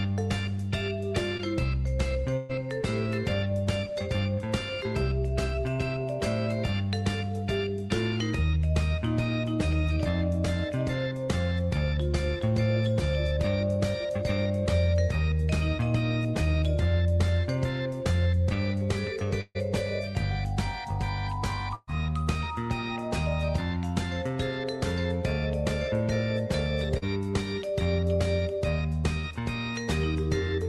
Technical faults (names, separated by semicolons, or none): short concealed packet loss; burst of packet loss